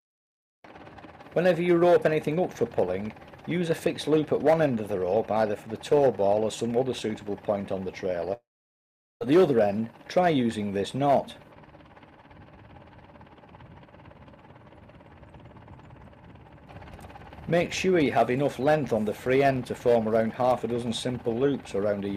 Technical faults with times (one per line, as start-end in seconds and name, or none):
8.33-9.22 long network dropout